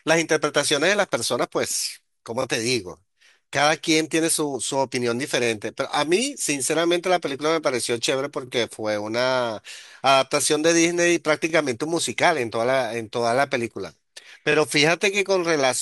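The speech has overlapping chunks, heard as brief stutters at 2.42–2.45, 8.47–8.50, 11.50–11.52 and 14.52–14.55 s. At each join the processing started a new 3-second chunk about 25 ms before the previous one ended, so that slice plays twice. Unlike a dropout or packet loss, nothing goes missing. Sound is duplicated, which gives a stutter or click rather than a silent gap, at regular 3-second joins.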